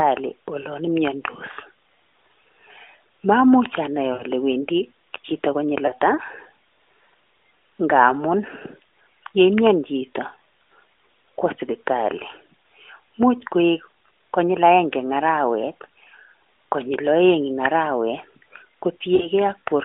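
Around 4.14 to 4.24 s, 5.86 to 5.92 s and 19.16 to 19.28 s the speech smears and fades: lost AMR speech frames, with the decoder stretching the last good sound at falling gain. Gaps of 60, 20 and 40 ms fit whole 20 ms frames over a narrowband phone line.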